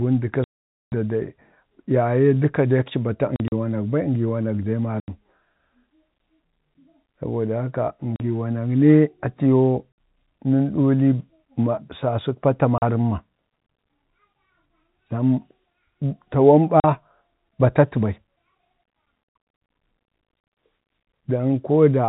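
Speech with packet loss filled with silence: hard-edged dropouts at 0.44–0.92 s (480 ms), 3.36–3.52 s (scattered), 5.00–5.08 s, 8.16–8.20 s, 9.92–9.98 s, 12.78–12.82 s, 16.80–16.84 s and 19.26–19.46 s (scattered). The gaps are multiples of 20 ms, which fits 20 ms packets replaced by silence at the receiver.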